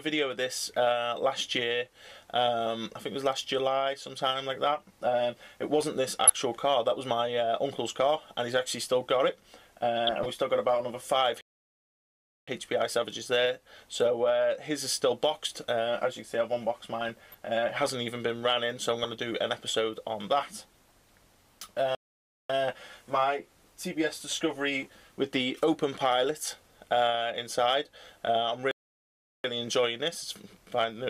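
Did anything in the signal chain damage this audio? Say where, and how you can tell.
Yes. Two kinds of damage are audible, one from the broadcast codec path and one at playback.

DAB burbling, from the codec and reception stage, appears in five short bursts: 6.27 to 6.35 s, 7.90 to 7.97 s, 10.07 to 10.26 s, 16.98 to 17.35 s and 19.03 to 19.26 s. Each is a cluster of blips confined to narrow frequency regions. The signal was received with a bit error rate of a fraction of a percent, enough for corrupted MP2 data to slip past error correction. Bad samples inject noise into individual sub-bands, and any corrupted scale factors make bands jump in level for up to a frame.

A playback stall cuts the audio to silence mid-flow three times: 11.41 to 12.48 s (about 1.07 s), 21.95 to 22.50 s (about 0.54 s) and 28.71 to 29.44 s (about 0.73 s). These gaps are far too long for a codec glitch. The player most likely ran out of buffered data or had its output thread blocked, then resumed once it recovered.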